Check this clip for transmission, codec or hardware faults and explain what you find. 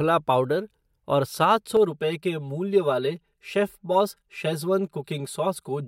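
One fault is present. From 1.77 s, after "पाउडर और सात", to the end, channel delay (comb filtering) appears. One channel lags by around 5 ms and is summed to mono, cancelling at evenly spaced frequencies from near 100 Hz, so the speech sounds hollow and phasey.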